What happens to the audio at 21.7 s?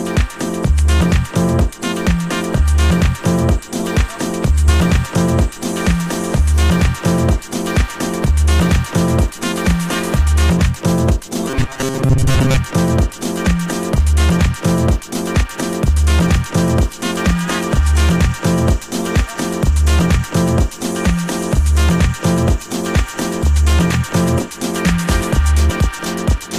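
Nothing goes wrong at 21.7 s; the audio is intact at that point.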